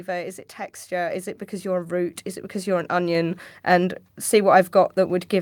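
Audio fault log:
1.11 s and 2.13 s, microphone volume stepped up: the call software judged the input too quiet and raised the microphone's gain in single jumps, about 4 dB after "it texture" and about 3 dB after "it because you're a", so speech and background noise both step abruptly louder together.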